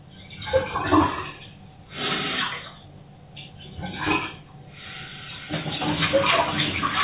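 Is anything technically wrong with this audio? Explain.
No, there's nothing technically wrong here that I can hear; the whole clip sounds fine, with nothing jumping out as a problem.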